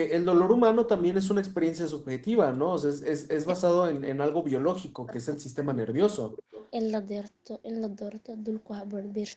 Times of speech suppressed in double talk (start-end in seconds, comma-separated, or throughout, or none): 3.30-6.20